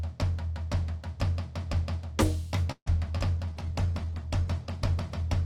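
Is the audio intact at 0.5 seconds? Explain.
Yes, the music plays through 0.5 seconds without any dropout, click, distortion or other audible fault.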